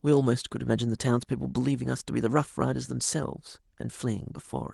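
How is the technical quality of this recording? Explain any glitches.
The technical quality of this speech recording is good, with no glitches to explain.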